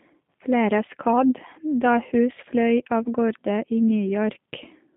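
G.729 coding runs through the whole clip, and the damage is plainly audible. The sound fits an 8 kbit/s G.729A link: the codec rebuilds each 10 ms frame from a vocal tract filter, a pitch predictor and a few pulses, so the speech comes out slightly rough and synthetic. The line passes only about 150 Hz to 3.6 kHz, which leaves the voice thin at the bottom and dull at the top.

VoIP packet loss concealed by the speech codec follows from 3.03 to 3.08 s, just before "gårde i". About 20 ms of audio goes missing, which fits a single lost packet. The decoder fills the gap by stretching its last pitch and filter at falling gain, so the voice briefly turns into a stretched, fading sound. Because each frame builds on the previous one, the sound stays weak or distorted for a moment after normal frames return.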